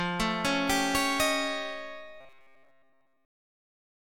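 From 2.21 s to the end at 4.10 s, the audio turns into a rigid, metallic buzz pitched at 133 Hz: robotic sound from repeated short buffers. That pitch matches a fragment of about 7.5 ms being looped, likely because fresh audio arrives too slowly, so most of this stretch is repeated material while the real signal is skipped. Unlike a stutter or dropout, nothing goes silent, and the fixed buzz pitch sets it apart from comb-filter colouring.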